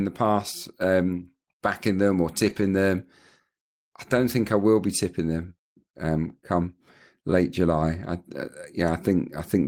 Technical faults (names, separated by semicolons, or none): lost packet rebuilt from error correction